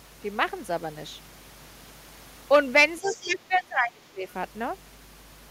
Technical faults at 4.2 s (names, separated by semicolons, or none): mains hum; speech suppressed in double talk